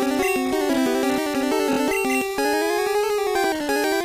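Repeated frames occur at 1.72 to 1.77 s. One 23.2 ms block of compressed audio is played two extra times, so the same tiny slice is heard three times in a row as a brief stutter, lengthening the clip by 46.4 ms.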